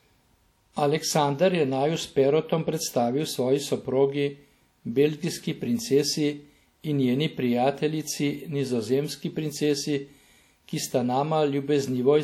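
Throughout the clip the speech has likely passed through WMA compression at a low rate, which fits a bitrate around 48 kbps. The transform encoder works on long blocks, so its quantisation noise smears across tens of milliseconds around each sound, and weak spectral detail is discarded outright. The damage is plainly audible: a ringing, washy texture with hiss that swells and fades with the signal, and nothing above about 19.6 kHz.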